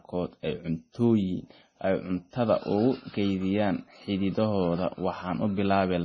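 The speech was likely squeezed through heavy MP3 compression at a low bitrate, around 24 kbps, throughout. The encoder starved for bits, so the treble stops dead near 10.3 kHz, and weak frequency lines flicker in and out, giving a watery, swirly texture and metallic chirps on s sounds.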